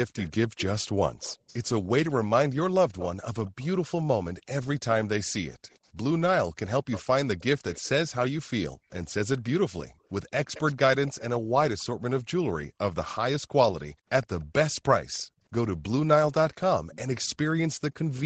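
Echo leak runs through this speech recording at 0.15–3.68 s, 5.7–7.89 s, 9.87–11.84 s, 14.23–14.7 s and 16.92–16.98 s. A faint second copy of the voice trails it by 116 ms, sitting about 15 dB below the speech at first and sinking to about 20–30 dB below later on. The likely cause is that the far end plays the call on a loudspeaker, and its microphone caught that playback, which the echo canceller did not fully cancel before it was sent back. Background gated by the echo canceller appears at 5.58–5.7 s, 8.75–11.52 s and 13.94–15.44 s. The room sound drops by up to about 40 dB in short gaps adding up to roughly a tenth of a second, four tenths of a second and half a second. This happens because the canceller pulled the microphone down hard while the loudspeaker was active and released it afterwards. The call's microphone processing band-limits everything to 8 kHz.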